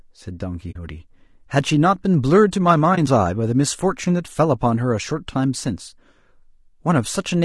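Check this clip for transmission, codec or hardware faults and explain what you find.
Two faults are present: codec coloration across the whole speech clip, and two brief dropouts.

Low-delay AAC compression is audible from start to finish. The voice sounds rough and grainy, with a noisy texture filling the spaces between harmonics and a top band that sounds thin and synthetic. This is likely AAC-ELD, the low-delay codec used for video calls. Its short transform frames resolve pitch harmonics poorly and spend bits inefficiently. The damage is plainly audible, which fits a low bitrate of around 32 kbps.

AAC frame loss with muting occurs at 0.71–0.76 s and again at 2.95–2.98 s. When a frame is lost, the decoder zeroes that frame's spectrum. The overlapping synthesis windows then fade the signal down and back up across the gap, so the first event is a soft-edged hole and the second a brief dip. 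The first gap is about 50 ms, consistent with two consecutive 20 ms frames lost. The second is shorter and fits a single lost frame.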